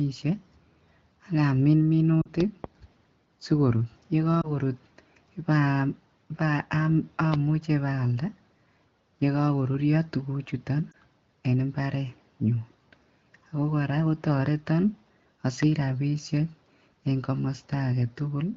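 At 2.21 to 2.28 s the speech smears briefly, the sign of lost AMR speech frames: about 40 ms (two frames) failed checks, and the decoder extended the last pitch and vocal tract shape at falling gain. Unlike a hard dropout, the sound fades to near silence within the two frames rather than cutting off with a click. The speech returns weak.

Between 2.40 and 2.66 s come two sharp loud pops, about 15 dB above the speech, which continues beneath them. The likely cause is a voltage step from a switch, plug or static.

A single frame is lost at 4.41 to 4.50 s, a 20 ms dip and warble.

Another loud pop, again about 15 dB over the speech, lands at 7.34 s. It is abrupt and sits on top of the audio rather than replacing it, which separates it from frame loss.

Right after "yekokorurio tuguchuton" at 10.91 s, one more 20 ms frame is concealed with the same brief warble.

A final single pop at 15.63 s stands about 15 dB above the speech, over the light HD Voice wideband coding.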